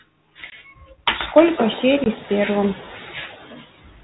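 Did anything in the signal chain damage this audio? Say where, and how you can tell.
Yes. Noise suppressor artifacts run through the whole clip, in the call-processing stage. The suppressor gates bands it judges to be steady noise, frame by frame, so the background pumps between and under syllables. This is most exposed after the room noise rises about 20 dB near 1.5 s.

Speech cut by the noise suppressor, also in call processing, hits 0.36–1.01 s, with about 400 ms affected and dips of about 14 dB. It returns from 2.75 s to the end, affecting about a second with drops of about 20 dB. Quiet speech was misclassified as noise and attenuated, so it sounds swallowed.

Packet loss on an ADPCM call, at the network stage, leaves hard-edged 20 ms holes at 0.50 s and 2.04 s, each consistent with a single lost packet. The G.726 decoder's adaptive predictor and step size desynchronise, so speech resumes slightly distorted before settling within tens of milliseconds.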